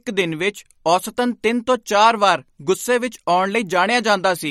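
Throughout the speech, the treble stops dead at about 16 kHz and the sound has a watery, swirling quality, with sibilants breaking into metallic chirps and consonant attacks smeared, which points to MP3 compression, likely at a low bitrate around 48 kbps. Starved of bits, the encoder drops weak frequency lines that flicker on and off between frames. That flickering separates it from a plain low-pass filter, which would dull the top end without any swirl.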